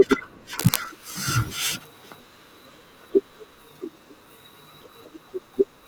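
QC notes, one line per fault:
0.59–0.77 s, cable scratch noise: a dense, uneven burst of scratching and rustling sits over the speech, only a few dB below it. The likely cause is a worn cable or connector being moved, so its contact resistance jumps rapidly and injects irregular noise. On a spectrogram it shows as a short vertical smear of broadband energy across the full frequency range. On the waveform the envelope turns ragged and spiky for under a fifth of a second.
0.87–5.88 s, pre-emphasis left on: from this point to the end the speech turns thin, bright and hissy on sibilants. A treble boost matching the J.17 curve was applied without the complementary de-emphasis, leaving 10 kHz about 11 dB higher than it should be relative to 1 kHz. On a spectrogram the upper bands brighten sharply at 0.87 s and stay elevated, with fricatives glowing strongly. The waveform shows sharper, spikier peaks from that point on.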